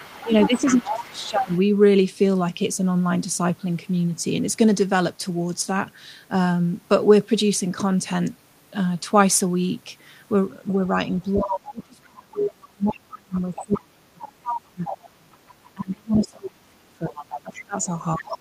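From 0.0 to 1.59 s, 10.68 to 11.83 s and 13.11 s to the end, the other side's voice leaks through, roughly 10 to 15 dB below the talker. This is likely residual loudspeaker echo, seen as faint, separate harmonic stacks on a spectrogram. Overlapping this, speech is suppressed in double talk from 0.23 to 1.56 s and from 11.35 to 18.35 s. It dips about 15 dB, then up to 30 dB, likely from the echo canceller turning both voices down. The waveform envelope visibly caves in there.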